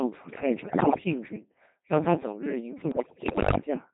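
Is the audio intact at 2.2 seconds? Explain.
No, not at 2.2 seconds or anywhere else, since the Codec 2 vocoder damage runs through the whole clip. Codec 2 doesn't keep the waveform. It sends just pitch, voicing, energy and a rough spectral envelope, and the decoder rebuilds the speech from sine waves. That's why it sounds heavily robotic and buzzy here. The coarseness fits the 2.4 kbit/s mode, so there's very little detail left to recover.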